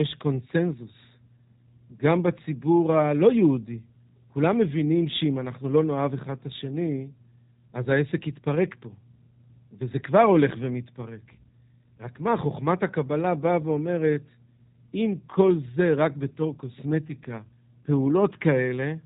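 From the start, the speech carries G.729 codec damage, plainly audible. The sound points to an 8 kbit/s model-based coder. It rebuilds each frame from a filter, a pitch predictor and a few pulses. Nothing above 4 kHz survives. The result sounds rough and slightly synthetic.

At 17.07 s, VoIP packet loss concealed by the speech codec briefly disturbs the audio until 17.11 s. A single 20 ms gap goes missing. The decoder extends its last pitch and filter with falling gain. This leaves a short stretched smear that fades, then a weak or distorted recovery.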